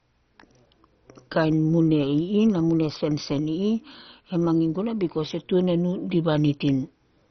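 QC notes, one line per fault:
Throughout, MP2 compression: the speech is dull, with nothing above 6.1 kHz and a heavy gurgling, granular grain. Likely starved Layer II bands, fitting a rate near 32 kbps.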